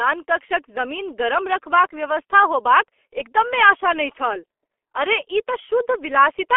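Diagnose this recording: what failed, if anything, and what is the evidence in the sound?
G.723.1 codec damage runs throughout this speech, at the codec stage. Nothing passes below 300 Hz or above 3.4 kHz, and the voice is muffled and hoarse with smeared consonants. Its slow, frame-by-frame voice modelling points to a very low bitrate near 6.3 kbit/s.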